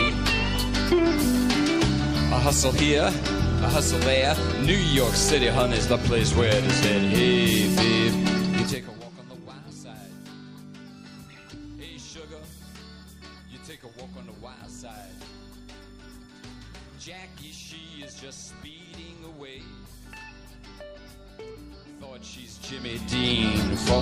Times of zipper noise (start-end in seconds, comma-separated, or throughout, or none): 22.52-23.34